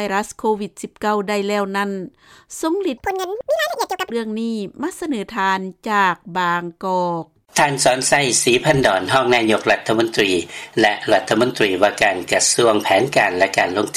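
A stretch of the audio was likely played back against the wrong clock, running 1.81 times faster than it was recorded, from 2.98 to 4.10 s. This section at the wrong speed sounds abruptly hurried and raised in pitch by roughly ten semitones, then snaps back.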